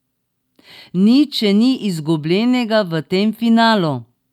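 No technical faults are audible.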